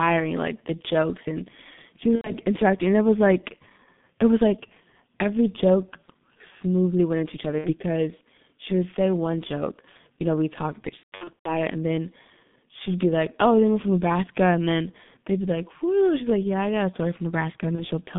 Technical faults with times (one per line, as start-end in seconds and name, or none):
0.00-18.18 G.723.1 codec
2.15-2.32 VoIP packet loss concealed by the speech codec
7.58-7.74 VoIP packet loss concealed by the speech codec
10.97-11.49 VoIP packet loss concealed by the speech codec
17.75-17.85 VoIP packet loss concealed by the speech codec